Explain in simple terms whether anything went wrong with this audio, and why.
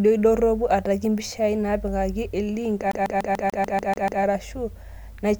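Right after "ataki mpishai naatpikaki elink", from 2.91 to 4.23 s, the speech stutters, repeating the same 0.15 s snippet nine times: a CD stuck on one turn, its scratch throwing the laser back.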